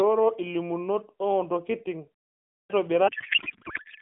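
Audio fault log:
2.48 to 2.70 s, clipped start after a pause: after a 0.42 s silence the output path was still waking, so roughly the first 220 ms of the returning speech never reached the listener and the sound begins abruptly mid-onset. On a waveform the envelope jumps from flat to full level with no rise; on a spectrogram energy appears as a hard vertical edge rather than building up from the onset.
3.08 to 4.02 s, codec payload misread: the last second turns to garbled noise and warble that barely tracks the speech, because the AMR frames arrive octet-aligned but are unpacked as bandwidth-efficient, so every field is read from the wrong bit position. The waveform shows level unrelated to the preceding syllable rhythm; the spectrogram loses formant structure and fills with smeared, swirling energy within the narrow telephone band.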